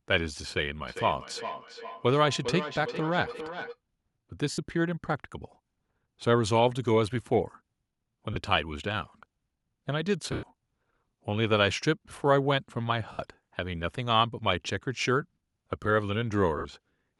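From 0.88 to 3.79 s there is feedback echo between two devices. A second device in the room replays the far microphone's signal, which is picked up again and missed by the echo canceller. Each syllable returns roughly 0.4 s later, peaking about 11 dB below the speech. On a spectrogram, faint copies of each syllable appear at that fixed spacing.

Lost LE Audio frames then hit at 4.51 s (70 ms), 8.33 s (30 ms), 10.32 s (110 ms), 13.12 s (70 ms) and 16.58 s (70 ms), lengths consistent with 10 ms LC3 frames. The decoder repeats the last spectrum with randomised signs, so the speech turns into a brief noisy smear. On a spectrogram, harmonics blur into flat noise bands, and the waveform fades within the longest gap.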